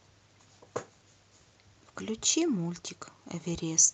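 No technical faults turn up anywhere in the speech. It has travelled over a WebRTC call path, and its top end stops at about 8 kHz, which points to an Opus call codec with its bandwidth limited there.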